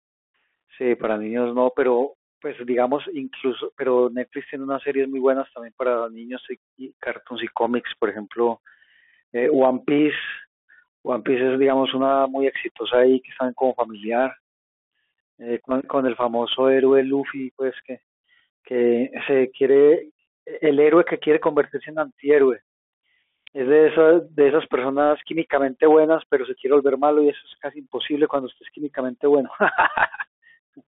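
Throughout, the speech carries Bluetooth CVSD headset codec damage. Sound sits between 250 Hz and 3.4 kHz, fitting a 64 kbps stream. Sibilants turn scratchy under granular hiss.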